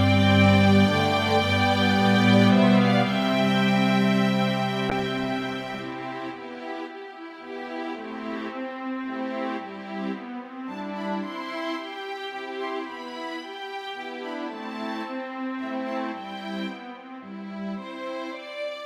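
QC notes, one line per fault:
4.9–9.25 s, call bitrate drop: the sound turns rough and muffled, with a watery smear, for about 4.3 s before clarity returns, consistent with the encoder being squeezed from around 128 kbps to about 22 kbps when the bandwidth estimate fell. Coarser coding adds grit, and the high band is cut. On a spectrogram, energy above a fixed ceiling vanishes abruptly across this span, leaving blocky, smeared texture below. The waveform shows little change.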